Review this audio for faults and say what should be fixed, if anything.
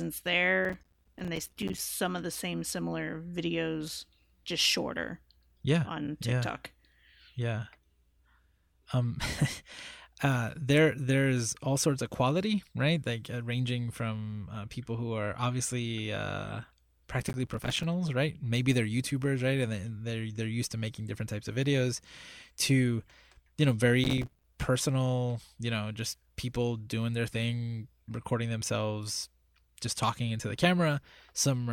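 Gritty bursts of crackle tear through the speech three times: from 0.65 to 1.79 s, ending just before "of the same similar"; from 17.20 to 17.83 s, right after "who are obviously uh"; and from 24.04 to 24.44 s, between "you know" and "personal you know just". This is processor overload crackle. Dozens of very short buffers, each around 5 ms, missed their deadlines and dropped to silence, leaving hard-edged gaps. Keeping processing load well below the real-time limit, or using a larger buffer, would prevent it.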